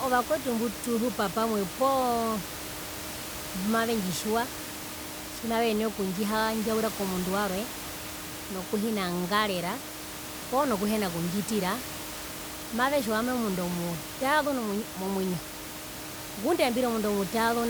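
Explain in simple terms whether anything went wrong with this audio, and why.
Nothing went wrong with this audio, because the background noise, which sits below the speech, simply comes from the room where it was recorded and is not a fault of the system.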